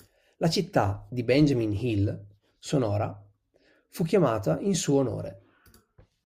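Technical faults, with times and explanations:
No technical faults are audible anywhere in the speech recording.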